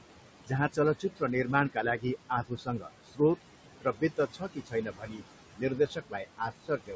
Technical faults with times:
0.00-6.95 noise suppressor artifacts
1.00-1.22 speech cut by the noise suppressor
2.48-3.20 speech cut by the noise suppressor
3.81-5.23 speech cut by the noise suppressor
5.55-6.95 speech cut by the noise suppressor

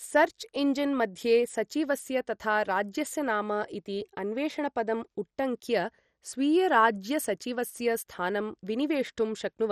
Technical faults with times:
0.00-9.71 MP2 compression

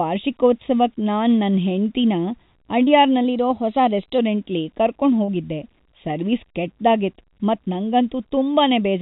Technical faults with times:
0.00-9.01 channel delay (comb filtering)
2.84-2.90 short concealed packet loss
3.25-4.18 drift correction step
5.25-5.31 short concealed packet loss

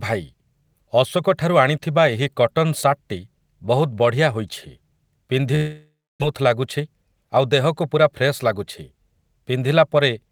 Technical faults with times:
5.55-6.24 long network dropout
6.79-7.37 jitter buffer speed-up

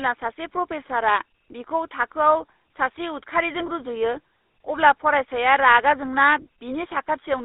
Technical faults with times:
0.00-7.44 GSM full-rate codec

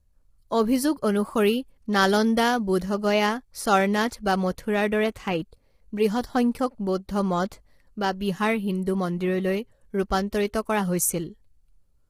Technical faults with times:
0.00-12.09 low-delay AAC compression

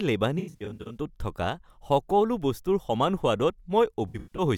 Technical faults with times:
0.39-0.97 AAC frame loss with concealment
4.08-4.44 AAC frame loss with concealment

